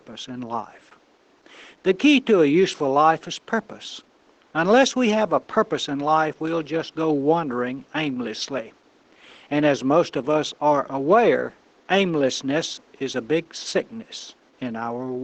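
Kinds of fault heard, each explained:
Opus voice compression: The speech went through Opus's SILK linear-prediction coder. The band stops near 8 kHz. Coarsely coded excitation leaves the speech plainly muffled, hoarse and slightly robotic, which fits a bitrate around 12 kbps. The quiet room noise burbles.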